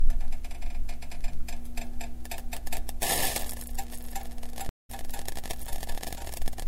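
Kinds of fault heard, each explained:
Stream reconnect: at 4.69 s the sound drops out for about 195 ms and returns at 4.90 s, but not where it stopped. It picks up roughly a fifth of a second further on, so a short stretch is simply missing. The connection broke, the player went quiet while it reconnected, then began decoding afresh from the live position rather than resuming the lost data, which is why the audio jumps ahead instead of continuing.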